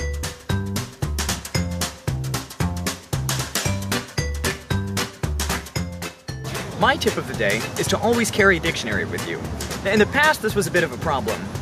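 No faults detected in this audio.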